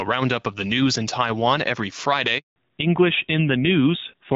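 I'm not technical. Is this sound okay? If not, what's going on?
No. A handover gap hits at 2.38 s and lasts until 2.56 s, almost a fifth of a second. The phone was switching the call to a different network, and no speech got through during the switch, so the voice cuts out abruptly and whatever was said in that moment is lost.

Right after that, from 2.56 s to the end, comes a fallback to narrowband. The call dropped from the clearer HD Voice mode heard before the gap to an older, lower-quality phone codec. Everything above 4 kHz is gone, so the voice sounds duller and rougher from there on.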